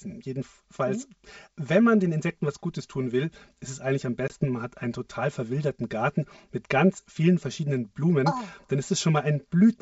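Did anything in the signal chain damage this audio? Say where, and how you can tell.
Yes. In the wiring or mix-down, channel delay (comb filtering) runs throughout. One channel arrives roughly 5 ms late before the mono sum, giving a hollow tone. A spectrogram shows evenly spaced dark notch bands from around 100 Hz upward.

On the network, packet loss on an ADPCM call occurs at 4.28–4.35 s. The waveform shows a hard-edged 20 ms silent gap, consistent with one lost packet. The mistracked decoder then brings the sound back slightly distorted before settling.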